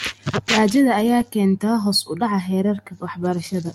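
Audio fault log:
No faults are audible anywhere in this speech clip.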